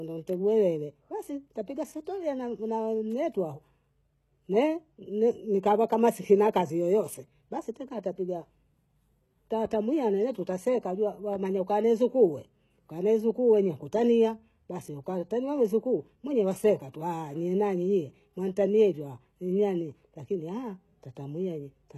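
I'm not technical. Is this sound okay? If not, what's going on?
No. Throughout the speech, the s sounds come out gritty and metallic, with nothing at all above about 12.3 kHz. That points to likely HE-AAC compression, which rebuilds the treble by copying lower sounds upward. Simple muffling would instead sound dull.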